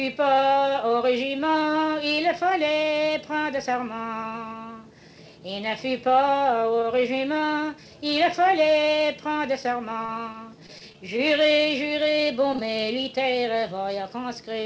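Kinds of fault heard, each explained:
Repeated packet loss (robotic sound): between 10.06 and 10.98 s, a handful of short dropouts, the longest about 27 ms, arrive in quick succession; each is bridged by extending the preceding sound, so about 11% of that stretch is synthesized fill, giving a choppy texture with fragments missing.
Short concealed packet loss: from 12.57 to 12.60 s, about 20 ms of audio failed to reach the decoder in time; the receiver continued the last sound for roughly 17 ms, then blended back into real signal, heard as a brief smear or wobble through the 8 kHz band-limited call path.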